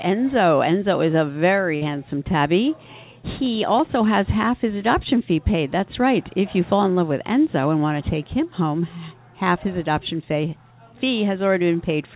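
At 1.76 s a burst of packet loss opens a gap lasting until 1.83 s. Consecutive packets went missing. The receiver stretched the last sound for about 53 ms and faded it. About 60 ms of audio is lost, and playback resumes further on. The whole clip has no content above 4 kHz, which fits G.711 mu-law on a call path.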